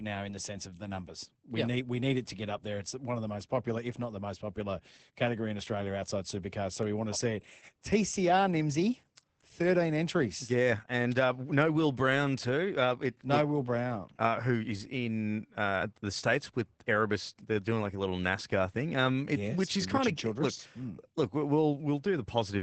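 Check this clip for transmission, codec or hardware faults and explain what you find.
There is one fault, and it runs through the whole clip: Opus voice compression. The speech is coded by Opus's SILK linear-prediction stage in wideband mode. Nothing reaches above 8.8 kHz, so sibilants lose their top and sound dull. SILK models the voice as a filter driven by a coarsely quantised excitation. That leaves the speech muffled, slightly hoarse and faintly robotic. The damage is plainly audible and fits a bitrate near 12 kbps.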